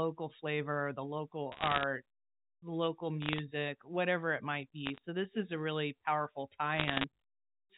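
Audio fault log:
1.52-1.83 s, 3.22-3.40 s, 4.86-4.98 s, 6.76-7.04 s: bit errors on a digital phone line. Short bursts of sharp ticks crackle over the speech, after "flavor the", "the local" and "a really powerful tie". Each flipped bit corrupts one telephone-coded sample. Sign or high-bit hits jump the waveform. The densest burst is the first.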